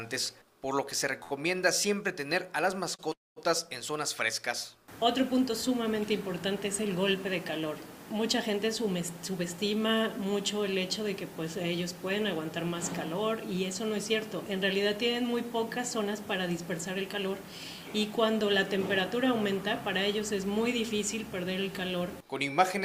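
At 1.23 s the sound hangs on a single moment for about 70 ms, with a slight buzz or dip, and at 2.95 s the same thing happens again for about 37 ms. These are short stalls from a late packet. The jitter buffer ran dry while a packet was overdue, so the receiver stretched the last sound to cover the wait. When the packet turned up, playback resumed from the same point, so nothing is lost. The sound simply arrives a little later.

Straight after, from 3.13 s to 3.38 s, the sound freezes. A held buzz or hiss fades away, leaving about 200 ms of silence before playback carries on where it stopped. This call audio freeze likely comes from packets held up in transit, which emptied the buffer for about 237 ms. The receiver extended the last sound until it decayed, and the stall adds a gap without removing any content.

From 9.00 s to 10.26 s the sound turns slightly hurried, running at about 105% speed with its pitch unchanged. 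The same thing happens from 15.78 s to 17.59 s at about 104%. This is jitter buffer speed-up. The buffer had built up more audio than its target, so the receiver repeatedly cut out pitch-period-sized slivers, roughly 70 ms in total each time, to bring the latency back down.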